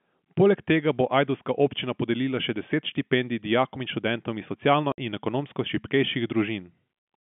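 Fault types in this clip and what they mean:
Packet loss filled with silence: at 4.92 s, between "dijakom in študentom iz" and "in ekonomsko", the speech drops into a 60 ms hole with hard edges. This fits three lost 20 ms packets that the receiver replaced with silence instead of concealing them.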